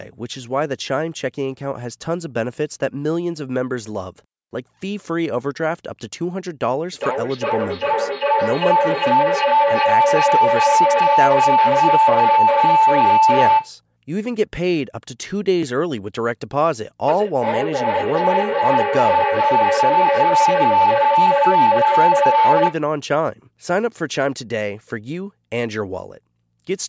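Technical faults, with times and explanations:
6.93–13.78 s and 17.08–22.85 s, feedback howl: A tone around 1 kHz swells over the speech, pulsing roughly every 0.4 s and peaking about 6 dB above the speech. Two devices in one room are on the same call, so each pass through the microphone-to-loudspeaker loop adds gain until the loop is broken.
15.63 s, repeated buffer: A single brief click. Fresh audio arrived late, so a 2.67 ms piece played twice with a hard join at the repeat. This fits a 128-sample buffer, and that small size is why the fault sounds like a click rather than a stutter.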